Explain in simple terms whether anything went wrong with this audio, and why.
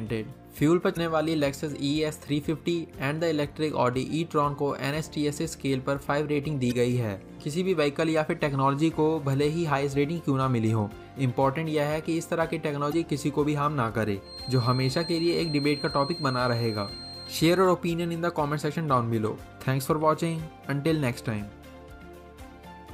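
Two things went wrong. The first is damaged data in a compressed stream. Short chirps or blips appear at 0.93, 6.68 and 12.89 seconds, each lasting about 40 milliseconds. Part of the file was spoiled there. The player lost its place and picked up again.

The second is a feedback whistle. From 14.19 to 17.68 seconds, a thin, high whistle near 4.2 kHz sits quietly behind the sound and swells and fades slowly. This is likely a loudspeaker feeding back into a microphone, held just short of howling.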